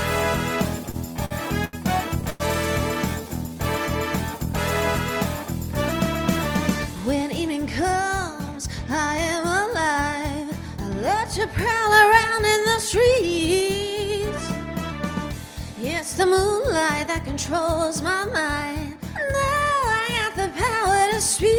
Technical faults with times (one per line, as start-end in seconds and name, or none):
0.91-2.42 repeated stalls (stutter)
19.88-20.94 jitter buffer speed-up